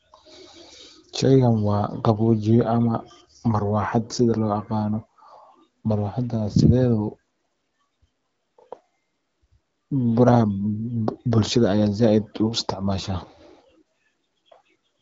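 Nothing is technically wrong with this speech recording.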